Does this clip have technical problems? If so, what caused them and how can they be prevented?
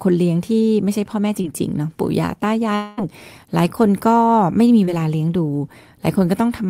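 Yes. There are two brief short concealed packet losses, at 1.41 to 1.45 s and 4.85 to 4.89 s. Each time about 20 ms of speech didn't reach the decoder in time, so the receiver stretched the preceding sound over the hole, leaving a quick smear. A bigger jitter buffer or forward error correction would help.

From 2.75 to 2.99 s, roughly 0.22 s of speech is replaced by a continuation of the preceding sound that never drops to silence before real audio resumes, with that stretch simply gone. A long network dropout is the likely cause. A steadier connection, such as wired rather than congested Wi-Fi, would prevent it.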